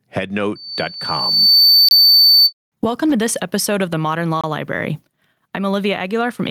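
Gain pumping runs through the whole speech clip: the gain is pulled down under every loud syllable, a level swing of around 15 dB. The likely cause is gain set far too high, with a fast limiter pulling it down.

A gap between chunks appears at 1.89 to 1.91 s and again at 4.41 to 4.44 s, each a 25 ms hole. The 2.5 s spacing fits chunked delivery with silence at each join. Unlike a dropout, no sound is lost.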